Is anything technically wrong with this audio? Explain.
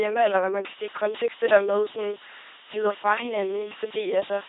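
Yes, there are two faults. The whole clip has been through an LPC-10 vocoder, and from 0.85 s to the end, starting just after "eller hvad man kan", a mains buzz sits under it.

The LPC-10 vocoder runs throughout at 2.4 kbit/s and damages the speech heavily. Each frame drives a simple vocal-tract filter with either a pulse train or noise, so the speech sounds buzzy and robotic. A spectrogram shows rigid harmonic striations or flat hiss, with nothing above 3.8 kHz.

The mains buzz runs from 0.85 s to the end. Switching spikes twice per 50 Hz cycle add a steady, raspy buzz, roughly 25 dB below the speech. A spectrogram shows unbroken horizontal lines at multiples of 50 Hz, and the waveform shows small spikes every 10 ms.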